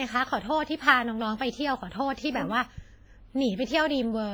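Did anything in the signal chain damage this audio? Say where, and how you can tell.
Yes, at the codec stage, throughout the speech: heavy WMA compression is the likely cause. It rings and washes, with hiss pumping alongside the voice, which fits roughly 24 kbps. A spectrogram shows time-smeared energy around onsets and patchy, zeroed upper-frequency bins.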